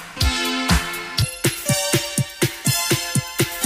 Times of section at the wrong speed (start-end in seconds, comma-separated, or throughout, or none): 1.22-3.65